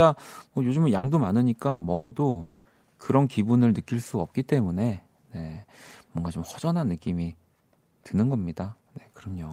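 Burst of packet loss at 0.97 to 1.06 s, 1.69 to 1.84 s and 2.29 to 2.38 s: runs of speech arrived too late or not at all, so the receiver stretched the last sound into a fading buzz or hiss for about 60, 120 and 60 ms. The speech then resumes with that stretch missing.

Long network dropout at 1.93 to 2.14 s and 2.41 to 2.68 s: the speech gives way to a held, decaying buzz or hiss for about 180 and 240 ms without falling to silence, then returns further on. This is likely a longer interruption in packet delivery.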